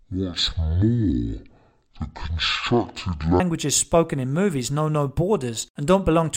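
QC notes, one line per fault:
0.0–3.4 s, stereo read as mono: speech runs at half speed and an octave low because interleaved left and right samples are played in sequence as one channel. Unlike a plain pitch shift, it also puts a faint mirror image in the upper spectrum.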